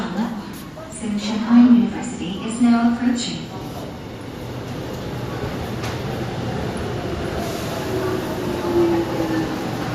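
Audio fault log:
throughout MP2 compression: The audio was likely squeezed through MPEG Layer II at a low rate, around 80 kbps. The encoder divides the spectrum into 32 equal sub-bands and shares out a tight bit budget, so the upper bands keep dropping out while the remaining ones are quantised coarsely. The result is plainly audible: a dulled top end, with a granular, gurgling texture as bands flicker in and out from frame to frame.
2.21–2.45 s, 5.28–5.38 s, 7.12–7.39 s, 9.31–9.52 s DAB burbling: In these spans, bit errors got past the error correction into the MP2 data. The error rate was a small fraction of a percent, highest near the end. Corrupted samples put short blips of noise into single sub-bands, and corrupted scale factors make sub-bands jump in level for up to a frame. That produces bursts of burbling over the audio. The 5.28 s burst is the shortest, touching only a few frames.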